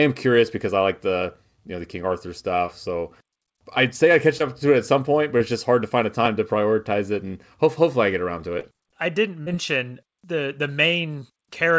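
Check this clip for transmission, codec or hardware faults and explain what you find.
The speech carries five brief dropouts that were covered over, all transmission faults of one kind, heard through a wideband call codec that leaves nothing above 8 kHz, consistent with G.722 at 64 kbps.

Short concealed packet loss occurs at 2.66–2.70 s, at 4.38–4.42 s between "I'd say I catch" and "up to it at", at 5.38–5.42 s between "at some point but" and "it's just hard to", at 8.60–8.65 s between "I get around to" and "I didn't", and at 9.43–9.56 s. The first three gaps lose about 20 ms of audio and the last two about 40 ms. Those packets arrived too late or not at all, so the receiver extended the preceding sound, following its pitch if it was voiced and using shaped noise if it was not, and then faded back into the real signal. Each one is heard as a short smear or wobble. The 9.43 s repair also stretches the timing slightly, by roughly 15 ms.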